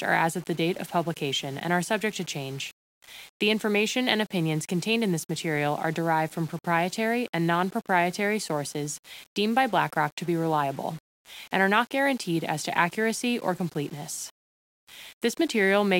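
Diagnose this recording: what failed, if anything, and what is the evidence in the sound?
Nothing in the speech signal points to a failure at any stage, since levels, timing and continuity stay stable throughout with no glitches or clipping to trace back to a fault; the grainy rounding noise some 40 to 50 dB under the peaks, and the grit or loss of the very quietest sounds, come from the 8-bit storage working as intended.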